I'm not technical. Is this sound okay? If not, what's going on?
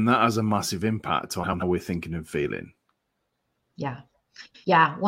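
No. Three brief stretches, 1.43 to 1.63 s, 3.00 to 3.18 s and 4.45 to 4.65 s, have frames out of order: two chunks of about 93 ms play swapped, causing a garbled flutter.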